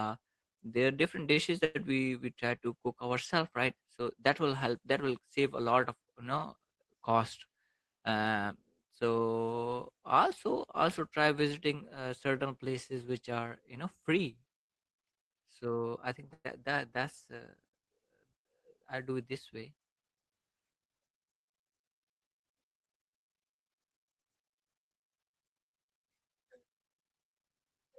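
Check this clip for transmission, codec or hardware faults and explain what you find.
Four network-related faults appear in the speech, all from packet timing on a call link. Two happen near the start, and two fall in the middle.

The first is a short stall from a late packet, at 1.33 to 1.39 s, right after "there are different". One packet arrived late and the jitter buffer ran dry. The receiver held the last sound for 33 ms until the packet came. Nothing is lost. A sound is simply drawn out, with a faint buzzy sustain, and the delay grows by 33 ms.

A call audio freeze follows at 1.65 to 1.77 s, just before "we we". Packets were likely held up in transit, which emptied the buffer. The receiver kept extending the last sound for 102 ms. It never dropped to silence. You hear a fading buzz where the sound hangs, and then the speech resumes from where it stopped. No speech is lost, but the delay rises by 102 ms.

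A jitter buffer speed-up runs from 13.22 to 14.10 s, after "visiting uh certain places". The buffer had built up too much audio. To shed about 70 ms, the receiver cut out tiny pitch-period slices again and again. The speech plays at 107% of normal speed. Pitch stays the same. The phrase sounds slightly rushed.

Scattered short gaps occur between 14.68 and 17.75 s. About three separate packets were lost or late here. Each hole was patched by continuing the preceding sound. Together the patches fill roughly 200 ms, which is about 7% of that stretch. The longest patch is around 100 ms. The speech stays clear, but brief smears and hiccups break its flow.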